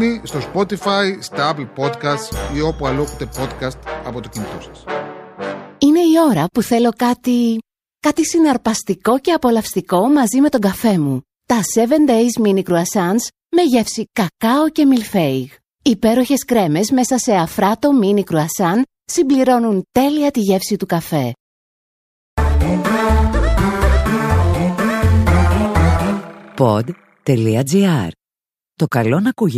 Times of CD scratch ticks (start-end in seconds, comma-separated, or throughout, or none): 10.58-10.91